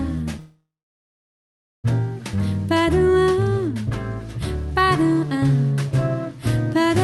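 A call audio freeze runs from 0.39 to 1.86 s: the sound smears into a brief fading buzz or hiss, then about 1.17 s of silence, before resuming where it stopped. This is likely a jitter buffer running dry while packets were delayed, adding roughly 1.45 s of lag without losing content.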